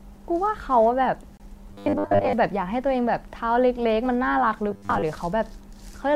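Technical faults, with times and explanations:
1.37–1.40 s, gap between stream segments: about 27 ms of hard-edged silence cuts into the sound where two stream segments meet. Their timestamps leave a small hole, so the player inserts silence instead of dropping any audio. The interruption is brief and abrupt.
1.71–2.33 s and 4.71–5.02 s, robotic sound from repeated short buffers: the speech becomes a rigid, metallic buzz fixed at 100 Hz that roughly follows the words. This is likely caused by late-arriving audio being replaced with repeats of a 10 ms buffer, with most of the real signal skipped.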